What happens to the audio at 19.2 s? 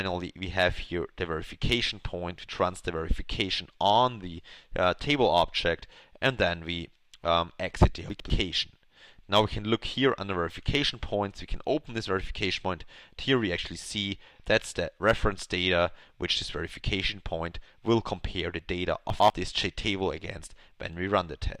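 Between 19.1 and 19.3 s two chunks play out of order: a 100 ms chunk arrives one chunk late, so the following chunk sounds first. The audio briefly jumbles across three hard joins. Unlike a dropout, nothing goes missing or silent, and unlike a stutter, nothing repeats.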